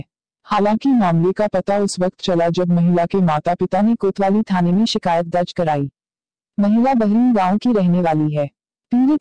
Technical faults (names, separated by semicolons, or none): wrong sample rate